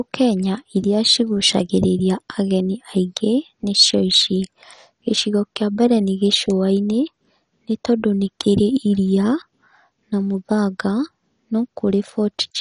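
Throughout the speech, the audio was likely squeezed through MP2 compression at a rate that fits roughly 48 kbps. Starved of bits, its upper sub-bands are switched off, leaving nothing above 11.3 kHz, and the remaining bands are coarsely quantised, so the speech sounds dull, gurgling and granular.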